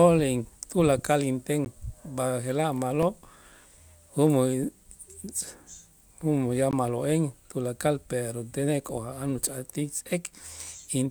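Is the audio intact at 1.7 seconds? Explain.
No. Right after "tulakal inten", at 1.65 s, there is a block of digital silence about 14 ms long. A run of samples drops to zero with no fade. At this length it is heard as a tick or dip.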